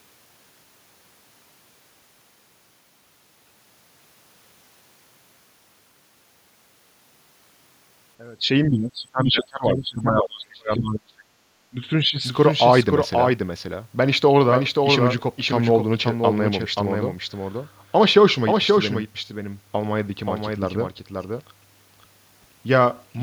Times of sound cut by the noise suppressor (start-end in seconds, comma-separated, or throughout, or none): none